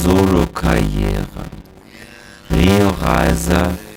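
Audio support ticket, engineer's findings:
Steady 100 Hz buzz for the whole clip, with the audio running at about half speed (0.533x) yet near its normal pitch. The cause is a block size mismatch (padded) between stages: each 10 ms block is only partly filled and the rest zero-padded. This fits roughly 256 samples written into 480-sample blocks.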